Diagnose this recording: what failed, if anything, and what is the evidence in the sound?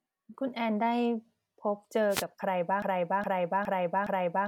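At 2.09 s a brief swish of static rises over the speech and clears by 2.24 s, about 150 ms in all. This is a wireless microphone noise hit, occurring in the analogue radio link ahead of any digital stage. The FM signal from the microphone faded as reflected paths cancelled the direct one, so the receiver's own hiss climbed through the audio until the carrier recovered a moment later.

From 2.82 s to the end, a fragment of about 0.41 s plays over and over, back to back, four times, with nothing new in between. That identical repetition is a broken-record loop. The likely cause is a stall in playback, storage or the stream buffer: the stage stopped receiving fresh data and kept resending the last block it held. Whatever should have been heard after 2.82 s is lost.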